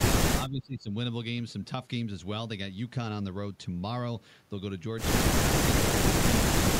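Speech suppressed in double talk appears three times: at 0.02 to 0.07 s, where the level drops by roughly 20 dB; at 0.38 to 0.91 s, a longer dip of around 15 dB; and at 6.01 to 6.07 s, again near 15 dB down. The likely cause is an echo canceller that heard both ends active at once, could not separate this talker from loudspeaker echo, and attenuated everything. The speech briefly sinks before recovering.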